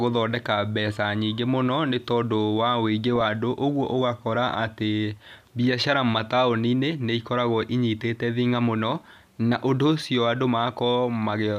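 A brief burst of burbling breaks into the speech from 3.08 to 3.21 s, and again from 10.58 to 10.67 s. This is DAB burbling. Weak reception let bit errors, roughly a couple per thousand, slip past error correction into the MP2 audio data. Corrupted samples then put short blips of noise in single sub-bands.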